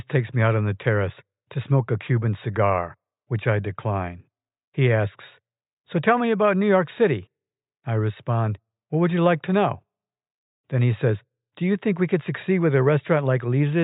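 No technical faults can be heard anywhere in the recording. Nothing in the audio calls for a time stamp or a description of something going wrong.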